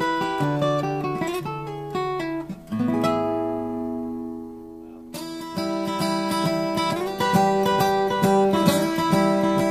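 Listening closely from beginning to end, nothing in the audio stood out as a technical problem.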